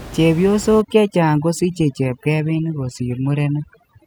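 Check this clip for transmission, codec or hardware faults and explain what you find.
One fault is present: overdone noise removal from 0.81 s through to the end of the clip at 4.07 s. Over that span the background drops and breaks up into twinkling, warbling specks. A noise reduction stage is pushing individual frequency bands far down or off whenever they sit close to its noise estimate. Because the room noise lies only about 16 dB below the speech, the quieter parts of the speech fall near that estimate and get stripped away along with the noise.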